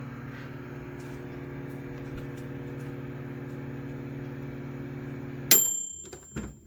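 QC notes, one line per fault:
Throughout, generation loss: the sound is swirly, smeared and hollow beyond what one encode would leave, and attacks blur. This likely comes from about seven successive MP3 passes near 92 kbit/s, each requantising on a shifted frame grid so that noise and spectral holes accumulate.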